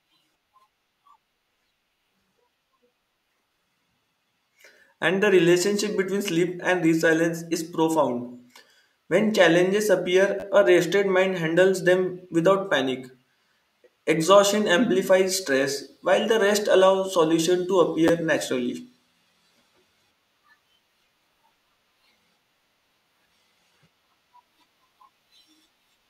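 At 10.40–10.43 s and 18.08–18.10 s, a repeated buffer occurs: fresh audio arrived late, so a 10.7 ms slice replays three extra times, then twice. The hard joins give a brief buzzy stutter, which fits a 512-sample buffer. Essentially nothing is skipped.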